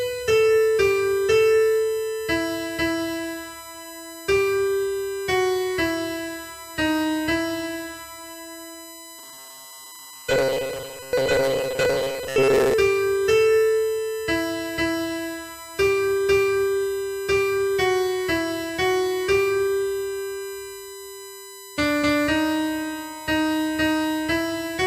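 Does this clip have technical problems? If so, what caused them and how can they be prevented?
Yes. A USB whine runs through the whole clip: a fixed tone at 1 kHz with its strongest component at 8 kHz, about 20 dB below the sound. It comes from current drawn in the bus's 1 ms frames and 125-microsecond microframes leaking through power or ground. Its kilohertz pitch separates it from mains hum at 50 or 60 Hz. Prevent it with a ground-loop isolator, a powered hub, or an interface with clean supply filtering.

From 9.19 to 12.74 s the audio turns into a rigid, metallic buzz at 133 Hz, a robotic sound from repeated short buffers. The likely cause is audio arriving too seldom, so that a segment of about 7.5 ms is replayed while much of the real signal is skipped. The buzz follows the sound's contour, which tells it apart from a steady interference tone. Prevent it by enlarging the audio buffer and keeping the processor free of competing load.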